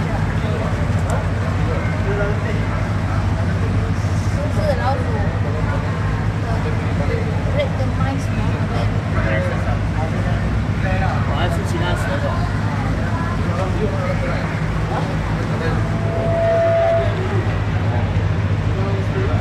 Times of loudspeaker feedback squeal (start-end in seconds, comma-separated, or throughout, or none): 15.78-17.31